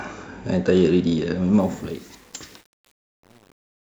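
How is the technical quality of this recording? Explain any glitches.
The recording has one flaw: truncation distortion on a fade. The speech fades out to the end at 4.0 s, and from 1.6 s onward that fade turns rough. The level control keeps too few bits and adds no dither, which fits an 8-bit stage. As the level sinks toward the smallest step, the waveform collapses into coarse square steps. The tail sounds gritty, worst from 1.62 s to the end.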